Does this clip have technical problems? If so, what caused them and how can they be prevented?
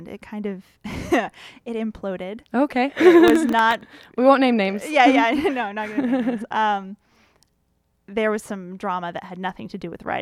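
Yes, there's a stretch of processor overload crackle from 3.28 to 3.81 s. The machine couldn't keep up with its audio buffers, which sound very short, well under a millisecond each, and it missed a run of deadlines in a row. That suggests roughly ten drops. Each miss replayed a scrap of old audio with hard edges, so you get that gritty tearing on top of the speech until the load eases. To prevent it, use a larger buffer and cut background CPU load while recording.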